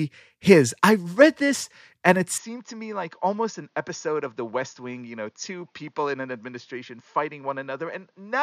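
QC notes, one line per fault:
2.38–8.43 s, input switched to a poorer device: straight after "read this and it" the speech drops about 10 dB with no gap, loses everything above 6.8 kHz and gains a new background noise roughly 45 dB down, likely from the recording jumping to a narrower-band microphone.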